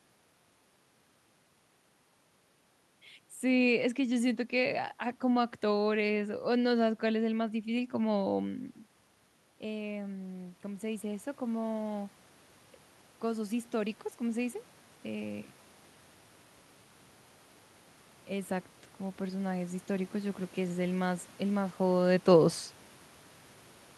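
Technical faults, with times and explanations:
9.61–12.2 s and 18.28–21.2 s, automatic gain rising: the voice and the room noise behind it swell together over two to three seconds, by about 5 dB and then about 3 dB. After the input fell by about 11 dB when the talker moved back, the automatic gain control slowly raised its gain to compensate.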